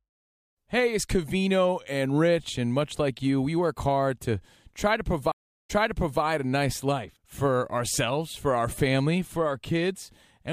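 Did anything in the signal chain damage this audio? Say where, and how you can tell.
Yes. The damage is a stream reconnect at the network and playback stage, from 5.32 to 6.23 s. After "hard to try to", the audio drops to silence for 0.36 s. It then resumes 0.55 s earlier in the stream, before "a nice life for", so a short stretch is heard twice. The connection broke and the player restarted its decoder mid-stream. The server resent a burst from an earlier point, which causes the backward jump.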